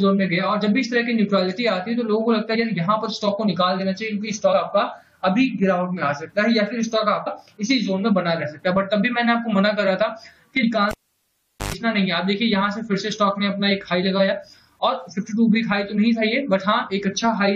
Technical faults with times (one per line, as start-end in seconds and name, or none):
2.54 compressed frames skipped
4.52 compressed frames skipped
7.26 compressed frames skipped
10.62 compressed frames skipped
10.91-11.74 cable pulled and plugged in
15.17 compressed frames skipped